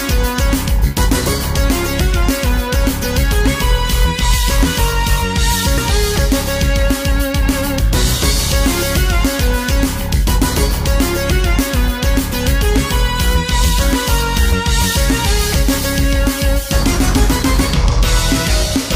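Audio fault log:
5.78 s, damaged data in a compressed stream: a brief glitch. Bytes in the encoded stream were corrupted there, so the decoder misread the affected frame, lost sync and jumped ahead to the next valid frame header.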